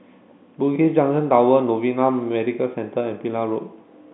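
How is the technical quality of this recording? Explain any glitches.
Nothing faulty is audible; the speech sits in the usual G.711 telephone band of about 150 Hz to 3.6 kHz, with nothing above 3.9 kHz, exactly as that coding should sound.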